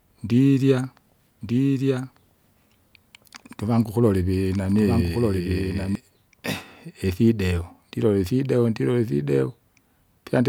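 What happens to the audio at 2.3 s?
At 2.3 s the speech has a doubled audio track, running from 1.41 to 5.95 s: a dry, full-band copy trails about a second behind, somewhat quieter, likely from a second capture path. On a spectrogram the speech pattern repeats, shifted right, with abrupt edges.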